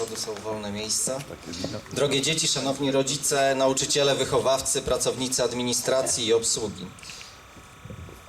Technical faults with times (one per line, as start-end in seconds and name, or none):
0.00-8.28 timecode bleed